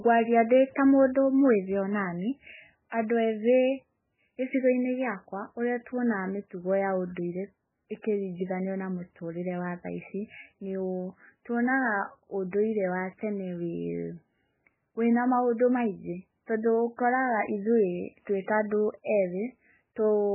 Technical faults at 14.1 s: MP3 compression

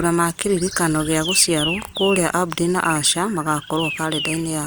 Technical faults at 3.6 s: none

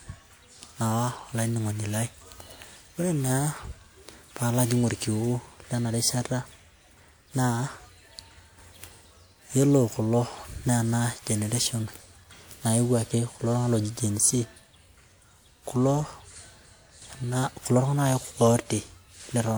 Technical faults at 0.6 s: generation loss

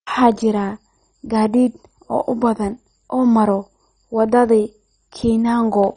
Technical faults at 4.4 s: MP2 compression

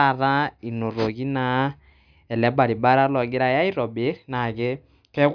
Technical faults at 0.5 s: none

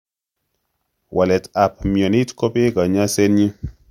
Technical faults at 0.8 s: none

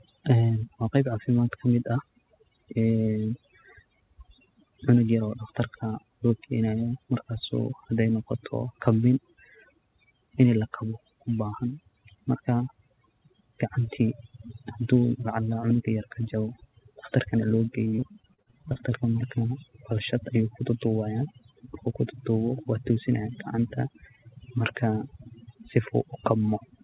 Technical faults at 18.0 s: overdone noise removal; repeated packet loss (robotic sound)

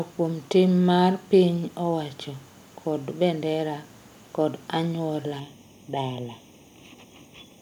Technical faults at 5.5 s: channel delay (comb filtering)

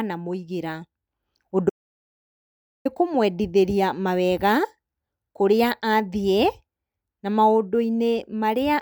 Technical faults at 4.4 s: none

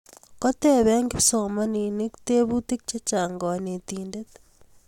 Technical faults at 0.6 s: none

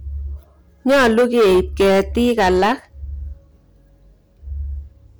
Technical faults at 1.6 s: hard clipping

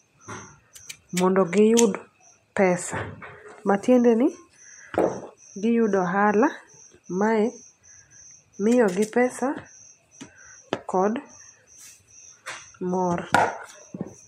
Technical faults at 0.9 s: none

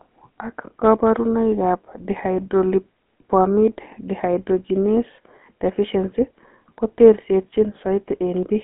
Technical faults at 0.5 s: GSM full-rate codec

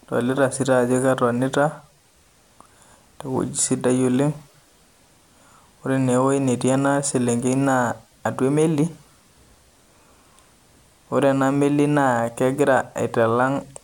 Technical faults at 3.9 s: none

